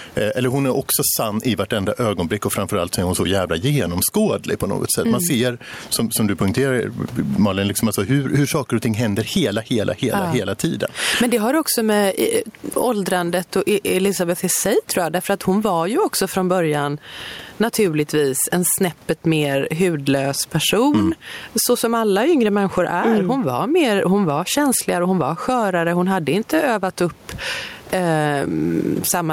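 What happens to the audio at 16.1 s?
At 16.1 s you're hearing gain pumping, and it isn't just that moment: it runs through the whole clip. The gain is likely set far too high for the mic, so a fast limiter or compressor keeps clamping down on each loud stretch of speech and then letting go. The room noise sits about 38 dB under the speech, and the gain swings by roughly 15 dB, leaving everything squashed.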